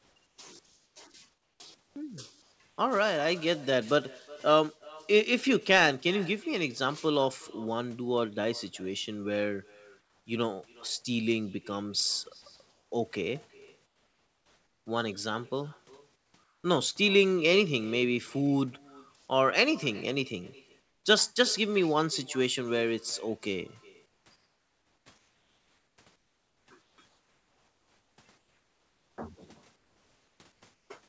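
Throughout the speech, an echo with no canceller is present. The far end evidently plays the call over a loudspeaker, its microphone picks that playback up, and nothing subtracts it before it returns. Every phrase is followed roughly 400 ms later by a quieter, thinner copy about 24 dB below the speech. Both the direct and echoed sound stop at 8 kHz, which fits the G.722 path at 64 kbps.

Comfort noise in place of the background, most likely from the sender switching off transmission whenever its voice detector hears no speech, appears in seven spans: 0.0 to 2.78 s, 10.0 to 10.26 s, 12.42 to 14.86 s, 16.16 to 16.64 s, 19.16 to 19.28 s, 20.80 to 21.04 s and 24.06 to 30.90 s. In each, the natural room sound gives way to a smooth, featureless hiss. It drops about 5 dB at 10.0 s and 20.8 s, where the background sits about 42 to 44 dB below the loud passages, and rises about 1 dB at 19.16 s.

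From 12.42 to 12.46 s there is sound dropped by the voice detector. The detector likely mistook some quiet sound for background and stopped sending. Roughly 20 ms of real sound is lost and replaced by that same steady noise, just as the long comfort-noise stretch begins.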